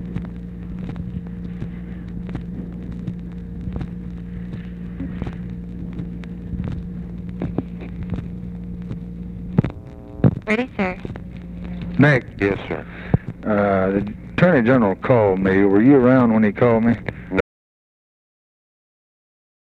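At 17.41 s the audio drops out to silence and stays silent through the end, about 2.4 s. The cutoff is abrupt, with no room tone left. Input was likely lost, through a disconnected device, failed link or mute, while recording continued.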